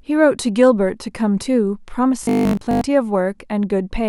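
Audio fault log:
2.23–2.81 s, robotic sound from repeated short buffers: speech becomes a rigid metallic buzz locked at 50 Hz, likely from a 20 ms chunk being replayed while most incoming audio is skipped; unlike dropouts or stutter, there are no gaps, just a fixed-pitch drone that loosely tracks the syllables.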